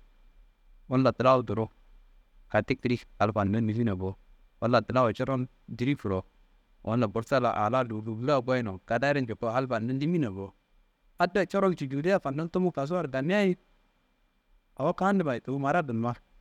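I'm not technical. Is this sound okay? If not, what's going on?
Yes, nothing in this recording sounds wrong or broken.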